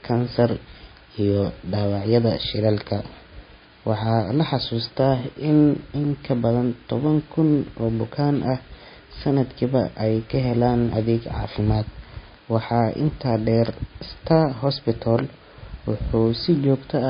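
From start to finish the speech has no content above about 5.1 kHz, and a watery, swirling quality hangs over it, likely MP3 compression at a low bitrate around 24 kbps. Short of bits, the encoder has chopped the treble and let weak frequency lines blink on and off between frames, so s sounds turn chirpy and metallic and onsets come out smeared.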